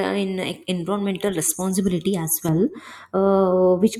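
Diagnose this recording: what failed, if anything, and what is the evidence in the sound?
A de-emphasis filter was applied wrongly in the playback processing stage. From 2.49 s, just after "uh environmental responsibility as", to the end, the speech turns dull and muffled. The treble slopes down smoothly, about 11 dB lower at 10 kHz than at 1 kHz. A treble cut meant to undo pre-emphasis hit audio that needed none.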